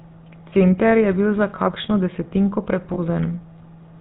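From the start, the speech carries the buzzy, gravelly roughness of the GSM full-rate codec, and the damage is plainly audible. The coder rebuilds the voice from a vocal-tract filter driven by a regular pulse train, keeping only one in three excitation samples, which fits a 13 kbps full-rate stream. Nothing above 4 kHz gets through, so the top end is dull and sibilants lose their edge.

At 2.94 s, lost GSM frames cut a gap of about 40 ms, ending near 2.99 s, which fits two dropped 20 ms frames. The decoder fills it by repeating the parameters of the last good frame. For that short stretch the voice freezes into a rough, metallic ring before normal decoding resumes. The loss is too short to fade fully to silence.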